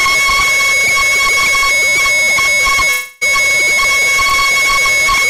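From 2.91 to 3.23 s the music gives way to a frozen continuation of its last moment, a buzzy, hissing smear that fades over about 0.3 s and never drops to full silence before the real audio resumes further along, with that stretch of the performance simply gone. The likely cause is a long network dropout: roughly 300 ms of audio failed to arrive, and the receiver filled nearly all of the hole by extending the sound it last had.

At 4.29 to 4.32 s there is a much briefer blip, a quick smear or wobble lasting only a few hundredths of a second before the music carries on. This is short concealed packet loss. About 20 ms of audio did not reach the decoder in time, and the receiver patched part of the gap, around 11 ms, by continuing the preceding sound and blending it back into the real signal.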